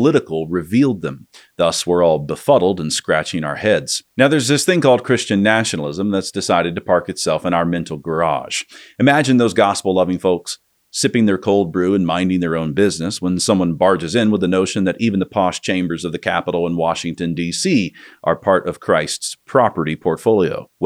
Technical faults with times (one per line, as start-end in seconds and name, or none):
none